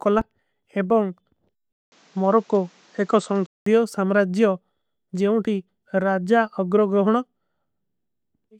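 An input switched to a poorer device from 1.72 s to 3.66 s: after a 200 ms gap the speech turns dull, with nothing above 8.1 kHz, a level shift of roughly 5 dB and a new noise floor about 40 dB down, likely from a changed microphone.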